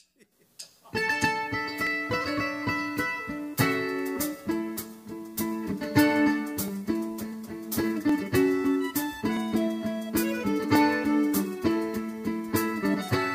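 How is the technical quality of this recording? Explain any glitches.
The recording has two kinds of glitch: five isolated clicks and three brief disruptions from damaged compressed data.

Sharp single clicks occur at 1.87, 6.68, 8.09, 9.37 and 10.75 s. They are likely dropped samples: about 0.7 ms of audio goes missing, so the waveform jumps straight to a later value and produces a click without audibly removing any sound.

Short disruptions occur at 4.16 to 4.18 s, at 7.32 s and at 12.93 to 12.95 s. These come from damaged data in a compressed stream. Corrupted bytes make the decoder misread or reject those frames and lose sync until it finds the next valid frame header, which leaves a brief burst of garbled output or a gap.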